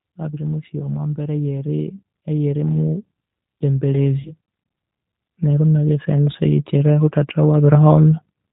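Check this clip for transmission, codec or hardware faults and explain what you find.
Three kinds of fault are present: codec damage throughout, one short dropout, and two slow level rises.

Throughout, the speech sounds rough and slightly synthetic, with nothing above 4 kHz. This is the G.729 codec, which fits an 8 kbit/s stream. It rebuilds each 10 ms frame from a vocal tract filter, a pitch predictor and a few pulses, so the damage is plainly audible.

From 0.29 to 2.95 s, and again from 5.38 to 8.08 s, voice and background swell together, by about 5 dB and then about 6 dB. This is automatic gain rising: the gain control judged the input too quiet and raised its gain gradually over those stretches.

From 4.21 to 4.33 s, the speech smears into a buzzy tone or coloured noise that fades, and stays weak just afterwards. This is VoIP packet loss concealed by the speech codec. About 40 ms of audio was missing, and the decoder extrapolated from its last pitch and filter, lowering the gain as it went.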